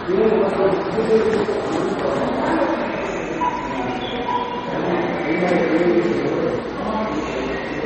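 From start to finish, the audio was likely squeezed through MP3 compression at a very low bitrate, which fits about 32 kbps. Starved of bits, the encoder discarded everything above 8.3 kHz and dropped weak frequency detail, leaving a dull, watery, swirling sound with smeared attacks.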